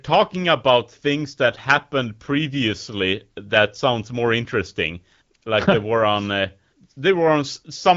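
No faults to report: the speech runs through an AMR wideband (HD Voice) codec path whose light coding texture fits one of that codec's upper rates, with nothing above about 7.5 kHz.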